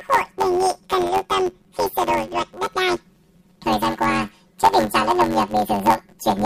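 From start to end, the speech carries a planar-read-as-interleaved fault. Each 10.88 ms block stores left then right samples, but playback treats them as alternating pairs. Every block plays twice at double speed. The short blocks leave a robotic buzz near 92 Hz, without a clear octave jump.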